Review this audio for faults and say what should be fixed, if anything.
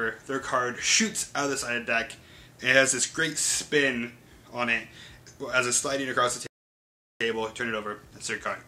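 A playback stall runs from 6.47 to 7.21 s. The player most likely ran dry of buffered data or had its audio thread held up, so it had nothing to send to the output for about 0.74 s. The sound cuts off in mid-flow and the gap is clearly audible as dead silence. Then output resumes.

Time-compressed catch-up follows from 7.21 s to the end of the clip. Having fallen behind during the stall, the player works off its backlog by trimming small slices out of the audio and cross-fading across each cut, running about 1.15 times faster than normal. Pitch stays where it should be, but the sound comes across as rushed until playback is back in step.

Prevention: give the playback path a deeper buffer and keep the audio thread free of blocking work so it never underruns, which removes the need for catch-up compression.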